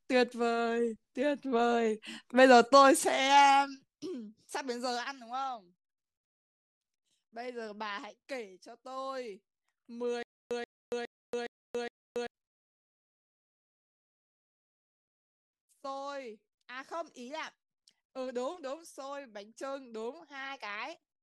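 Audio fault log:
10.23–12.27 s, stutter with silent gaps: a 0.13 s speech fragment repeats five times, each followed by 0.28 s of digital silence, likely a stalled stream replaying its last fragment. The spectrogram shows identical blocks between blank columns, and the waveform flatlines between bursts.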